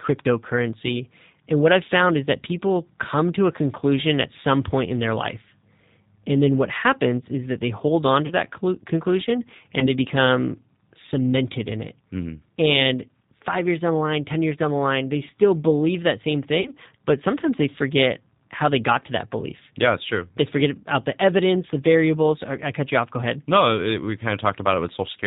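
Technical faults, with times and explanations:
throughout G.729 codec: the speech is carried at 8 kbit/s, likely G.729A, and rebuilt from a vocal tract filter, pitch predictor and sparse pulses, so it sounds plainly rough and synthetic, with nothing above 4 kHz.
8.26–8.34 s, 9.79–9.89 s, 16.61–16.71 s VoIP packet loss concealed by the speech codec: after "that they hold on", before "become cemented in it", and between "still believe that same" and "but sometimes they forget", about 40, 20 and 40 ms of audio go missing. The decoder extends its last pitch and filter into a fading buzzy tone or coloured noise, and the speech stays distorted briefly after each gap.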